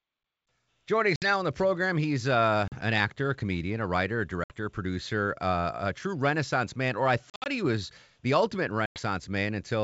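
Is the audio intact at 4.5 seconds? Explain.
No. From 4.44 to 4.56 s, between "comedian a writer a" and "a producer uh a", packet loss on an ADPCM call leaves a hard-edged 60 ms silence, a few packets' worth. The decoder's predictor and step size then mismatch the sender's, so audio returns with brief, slight distortion.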